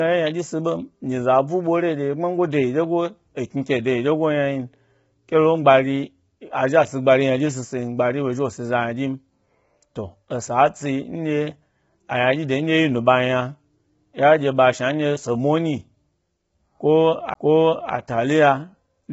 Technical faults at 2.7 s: low-delay AAC compression

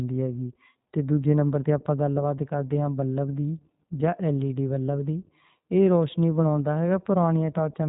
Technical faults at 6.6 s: iLBC codec

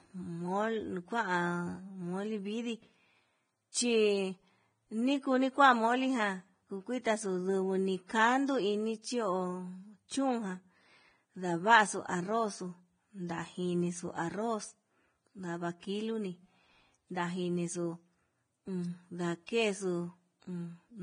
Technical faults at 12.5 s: Vorbis compression

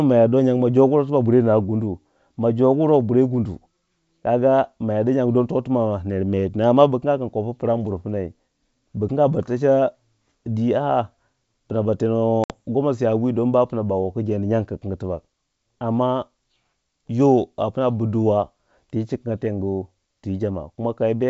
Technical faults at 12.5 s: packet loss on an ADPCM call

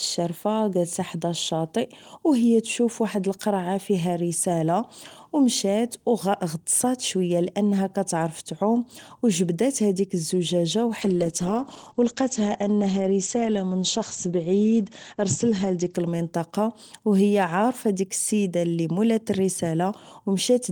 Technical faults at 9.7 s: none

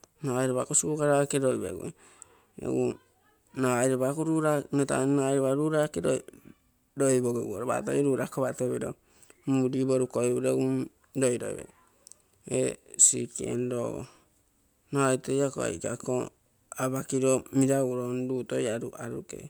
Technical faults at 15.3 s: none

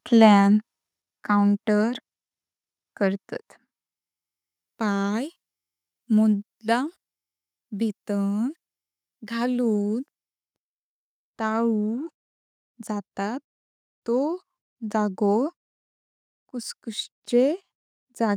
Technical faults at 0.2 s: microphone overload

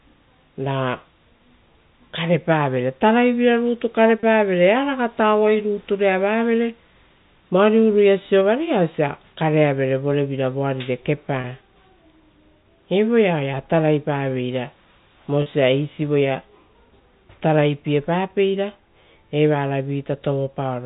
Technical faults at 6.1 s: none

